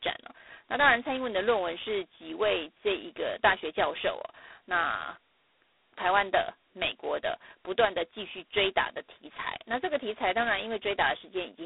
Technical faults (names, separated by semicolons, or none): G.726 ADPCM